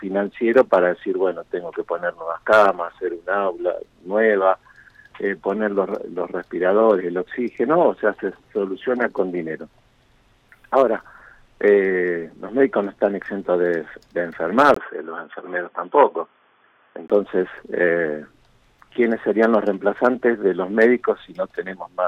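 From 14.74 to 17.10 s the audio turns dull and boxy, with nothing above 3.5 kHz, after a 20 ms gap, then clears again. That points to the input likely switched to a poorer device; the gap and faint new background noise at unchanged level separate it from a simple filter.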